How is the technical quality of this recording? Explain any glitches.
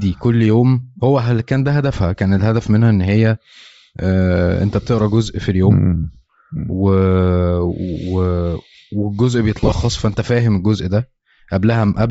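The quality is fair but compromised. Coding damage is plainly audible throughout, and there are two brief dropouts.

Throughout, the speech has a breathy, grainy edge. The likely cause is Bluetooth LC3 compression at a low rate, around 32 kbps, with 7.5 ms frames. The codec zeroes much of the upper spectrum and fills it with noise.

At 6.13 to 6.17 s, and again from 9.58 to 9.72 s, lost LE Audio frames cause the sound to smear briefly. The decoder repeats the last spectrum with randomised signs. The first gap is about 30 ms. The second is scattered over 135 ms, with runs up to about 30 ms.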